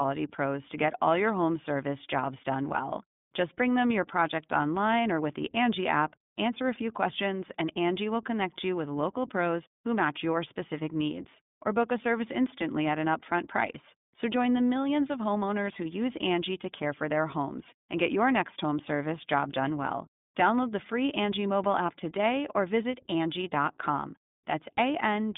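iLBC codec damage runs throughout this speech clip: each 20 ms frame is coded independently, leaving a rough, synthetic edge and nothing above 3.7 kHz, which fits the 15.2 kbps mode.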